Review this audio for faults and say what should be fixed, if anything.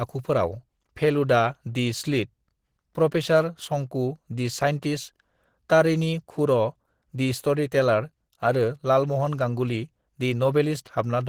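The speech sounds hoarse and muffled from start to finish, with a rough, grainy texture on the upper frequencies and plainly audible coding damage throughout. This is likely Opus compression in its hybrid mode, where the lower band is coded as speech and the top band is reconstructed from folded or noise-filled energy, which fits a rate around 16 kbps. To prevent it, encode the speech at a higher Opus bitrate or keep a lossless master.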